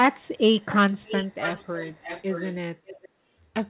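Speech, with echo leak, likely from a far-end echo canceller failing to remove loudspeaker pickup: delayed copies return about 0.47 s late at 0.16–0.36 s (very faint), then about 0.59 s late at 0.6–2.55 s (clearly audible) and 2.86–3.09 s, all band-limited below 4 kHz.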